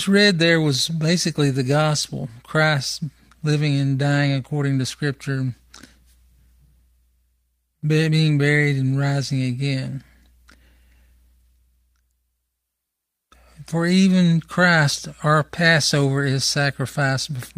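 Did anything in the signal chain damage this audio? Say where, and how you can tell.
No, nothing in this speech recording stood out as damaged on listening, at any stage of the chain.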